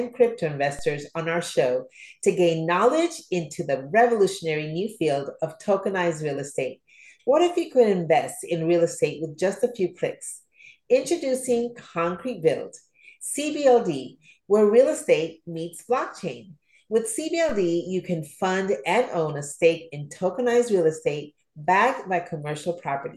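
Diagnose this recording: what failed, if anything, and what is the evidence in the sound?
Low thumps at 0.79 s and 17.49 s mark a DC step, a sudden zero-line shift of about -28 dBFS at the converter, bleeding away through a 2 Hz high-pass.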